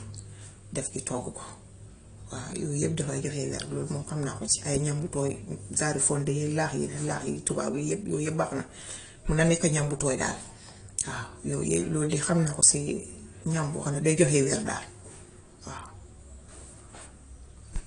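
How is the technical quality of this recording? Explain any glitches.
The recording carries audible lossy-compression damage across its whole length, likely from AAC compression. From start to finish the speech sounds dull and smeared, with a watery, fizzy edge on sibilants. Nothing reaches above 10.1 kHz. The encoder, short of bits, drops the top band entirely and coarsely quantises the rest, which fits a low bitrate around 32 kbps. On a spectrogram this shows as a hard ceiling at 10.1 kHz, with patchy holes and blurred, speckled energy in the upper bands.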